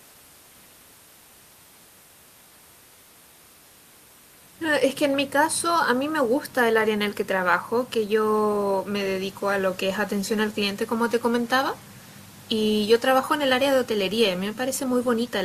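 No technical faults can be heard in this speech recording.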